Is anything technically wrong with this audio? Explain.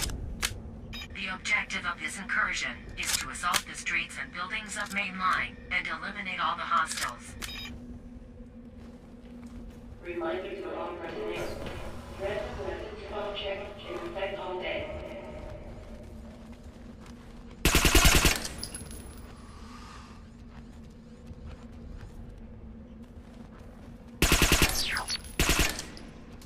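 No, no technical faults.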